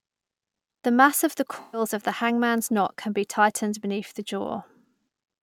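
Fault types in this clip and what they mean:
AAC frame loss with concealment: From 1.60 to 1.81 s the speech turns briefly smeared and noisy, with a hollow, phasey quality, then returns to normal. A run of lost AAC frames, consistent with roughly six frames or about 128 ms of missing audio, was patched by the decoder from the last good spectrum, with randomised signs and estimated energy. The loss is short enough that the gap is covered by this synthetic texture rather than by audible silence.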